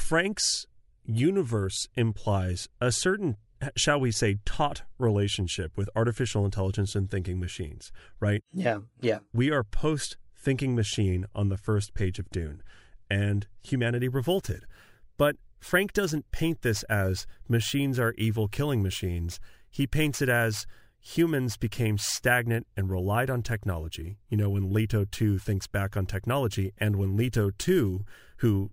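From 14.0 s onward there is imaging from sample-and-hold upsampling. Speech went from 24 kHz to 48 kHz by unfiltered sample repetition. A mirror image spans 12 to 24 kHz, about 23 dB down, heard as a metallic fizz tracking speech level.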